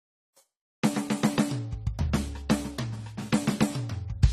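From start to finish the music is dull and smeared, with nothing above 14 kHz and a warbling, fizzy texture on sustained tones. This is likely AAC compression, with AAC-LC quantising coarsely and leaving spectral holes, consistent with a rate near 32 kbps.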